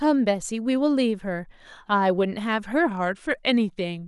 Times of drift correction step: 2.86-4.08

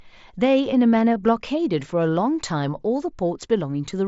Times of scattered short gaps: none

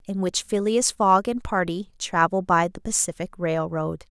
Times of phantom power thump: none

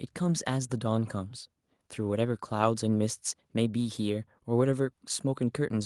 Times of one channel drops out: none

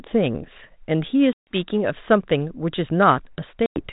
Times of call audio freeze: none

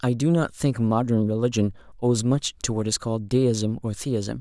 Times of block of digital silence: none

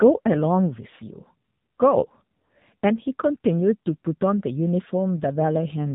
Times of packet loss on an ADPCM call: none

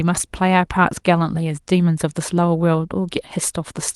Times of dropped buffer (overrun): none

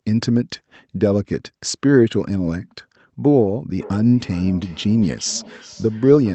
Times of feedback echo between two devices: 3.81-6.35

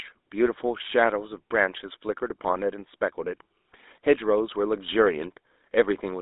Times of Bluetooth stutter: none

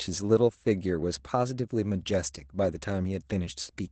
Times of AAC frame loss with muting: none

